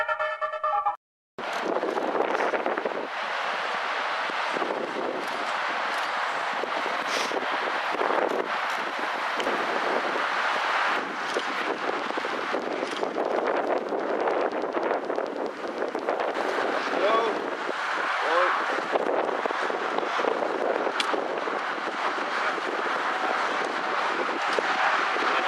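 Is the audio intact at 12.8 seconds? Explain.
No. A train of clicks runs from 11.78 to 17.38 s, regular ticks at 9.5 per second, peaking somewhat above the sound, likely from equipment interference.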